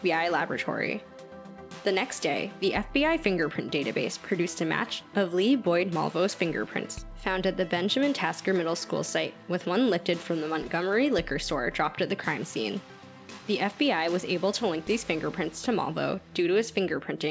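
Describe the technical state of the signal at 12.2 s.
At 12.2 s the audio is intact, carrying only the ordinary character of the call path, with nothing above 8 kHz, which fits a wideband call codec such as G.722.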